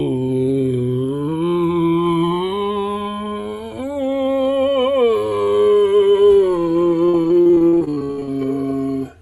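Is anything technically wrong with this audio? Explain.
Yes, there are two problems in this music clip.

Channels drifting apart runs throughout. The left and right sides sit on clocks a few hundred ppm apart, so their offset creeps to around 3 ms. Summed to mono, that sounds like slow flanging.

Repeated packet loss (robotic sound) hits from 7.05 to 8.29 s. Twenty dropouts, the longest 64 ms, get patched by stretching the previous sound. About 43% of that stretch is filler, so it turns choppy, with pieces missing. This sits on top of the usual Opus call-codec coloring, band-limited to 12 kHz.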